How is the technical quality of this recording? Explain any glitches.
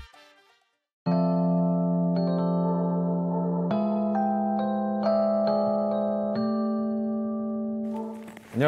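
No technical faults are audible.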